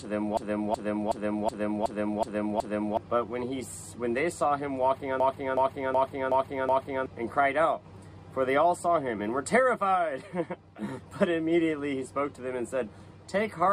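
System hang loops at 0.37 to 2.97 s and 5.20 to 7.06 s: the driver froze while the hardware kept replaying one 0.37 s buffer (which fits 16384 samples). It repeats seven, then five times, a stutter at 2.69 Hz, with about 3 s and then 2 s of audio lost.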